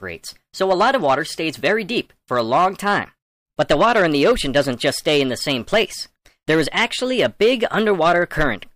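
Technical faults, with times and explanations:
Throughout, hard clipping: the signal arrives about 7 dB hotter than the stage can carry, so every peak exceeding the ceiling is sliced off flat. Only a small share of the waveform, around one sample in fifty, sits at that limit, which keeps the damage to the loudest moments. Each flattened crest creates sharp corners that spray harmonics high into the spectrum, heard as a gritty crackle riding on the peaks of the sound.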